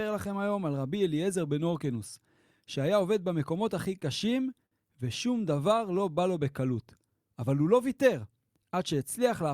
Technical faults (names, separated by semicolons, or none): repeated stalls (stutter); jitter buffer slow-down; jitter buffer speed-up